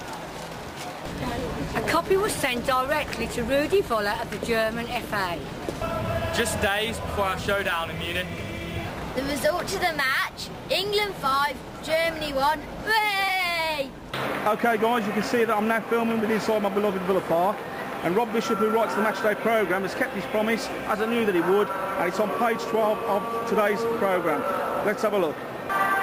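No technical faults can be heard at any point in the audio, so there is nothing to describe in time order.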